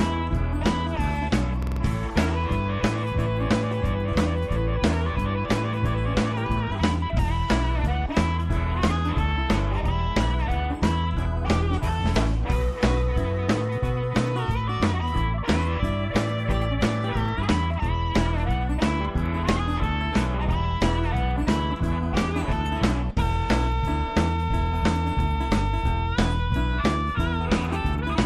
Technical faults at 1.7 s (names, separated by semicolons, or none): repeated buffer